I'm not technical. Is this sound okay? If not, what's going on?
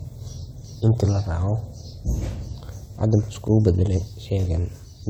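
Yes, this recording is fine. There is no technical problem anywhere in it that needs explaining.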